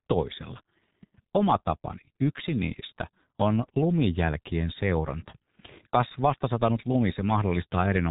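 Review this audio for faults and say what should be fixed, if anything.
The speech carries G.723.1 codec damage from start to finish. Nothing above about 3.8 kHz survives, so the voice sounds muffled and boxed in. The damage is heavy. Consonants smear and the tone turns hoarse. The codec models the voice in long 30 ms frames and updates that model slowly, so fast changes blur. The coarse result fits a bitrate near 6.3 kbit/s. To prevent it, route calls through a wideband codec at a higher bitrate.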